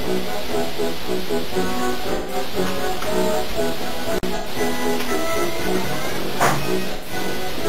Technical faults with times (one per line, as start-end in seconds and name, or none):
2.14-2.34 AAC frame loss with concealment
4.17-4.23 intermittent contact
4.36-4.47 AAC frame loss with concealment
6.92-7.12 AAC frame loss with concealment